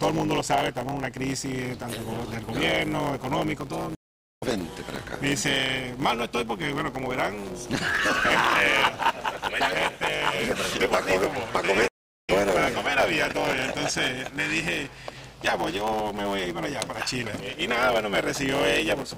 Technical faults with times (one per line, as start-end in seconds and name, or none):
0.00-19.18 block size mismatch (truncated)
3.95-4.43 stream reconnect
11.88-12.30 stream reconnect